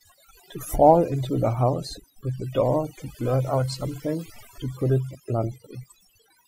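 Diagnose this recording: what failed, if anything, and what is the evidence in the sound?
Overdone noise removal at the call-processing stage throughout: near-silent background with twinkling specks; the spectrogram shows scattered isolated bins and holes between harmonics.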